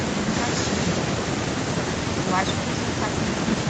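No technical faults are audible.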